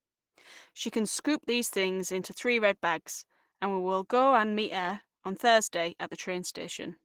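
Opus compression throughout: the speech sounds hoarse, grainy and plainly damaged, likely from hybrid-mode coding at a low bitrate near 16 kbps, though content still reaches 20.4 kHz.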